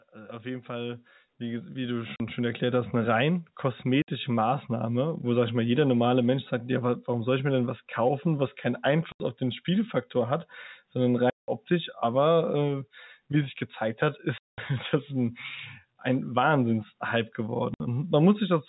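From 0.11 s to 3.23 s, automatic gain rising lifts the level by about 14 dB. The gain control judged the input too quiet and raised its gain step by step over those three seconds, so the speech and the background noise beneath it swell together rather than the speech alone getting louder.

Within that ramp, at 2.16 s, comes the first instance of packet loss filled with silence: a 40 ms hole. Further holes follow at 4.02 s (60 ms), 9.12 s (80 ms), 11.3 s (180 ms), 14.38 s (200 ms) and 17.74 s (60 ms). Each time, the receiver got nothing for a stretch and played digital silence in its place. Every gap length is a multiple of 20 ms, which fits 20 ms packets. The cuts start and stop abruptly, with hard edges.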